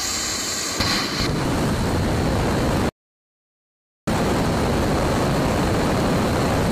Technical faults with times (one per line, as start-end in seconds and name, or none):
2.89-4.07 audio dropout to silence